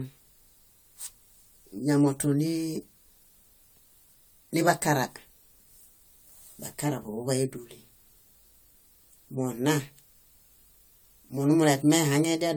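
From start to finish the speech sounds swirly and hollow, with smeared consonant onsets and a watery shimmer. The likely cause is generation loss: repeated decoding and re-encoding, which fits around five passes through AAC-LC at about 96 kbit/s. Every pass requantises on a shifted frame grid, so noise and spectral holes stack up. A single encode at that rate would sound far cleaner, and the bandwidth still reaches 20 kHz, so the damage comes from repetition, not a low bitrate.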